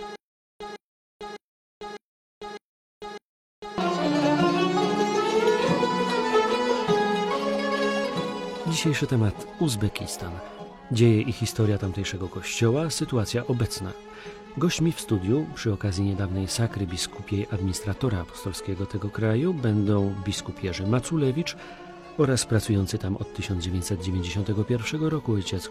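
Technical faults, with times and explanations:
0.0–3.78 s, stutter with silent gaps: the clip opens already caught in a repeating pattern, where a short burst of about 157 ms plays, then cuts to digital silence for about 447 ms, and the same burst returns. This cycle comes round every 0.6 s or so and repeats six times. The even spacing and identical fragment point to a likely stall in playback or streaming. At each retry the last buffered piece is replayed before the buffer runs empty again, so the audio belonging to those gaps is lost.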